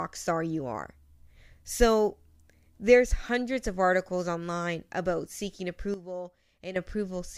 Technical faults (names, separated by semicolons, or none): sudden gain jump